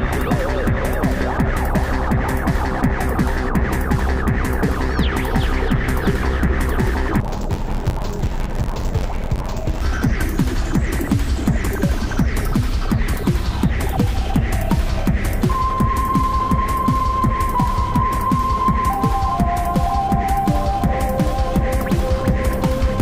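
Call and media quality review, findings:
Dull, robotic, buzzing at about 92 Hz, 7.20–9.82 s. Interleaved audio read as planar in a format-conversion stage: 10.88 ms stereo blocks split into halves, played as left/right.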